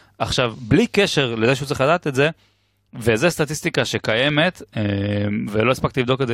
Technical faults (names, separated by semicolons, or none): none